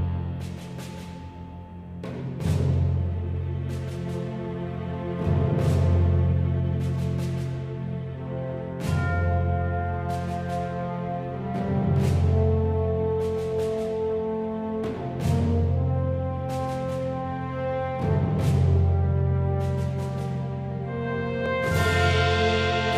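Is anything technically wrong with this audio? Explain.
No, nothing technically wrong stood out on listening to this audio.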